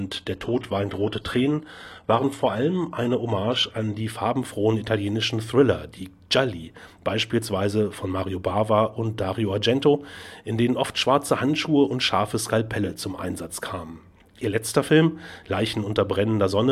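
From 0.0 to 4.0 s, an adaptive stream starting at a low bitrate: the player began on a lean rendition, with synthetic-sounding treble, nothing above 12.3 kHz and stronger artefacts, suggesting HE-AAC near 16 kbit/s. At 4.0 s quality jumps gaplessly, fitting AAC-LC near 96 kbit/s.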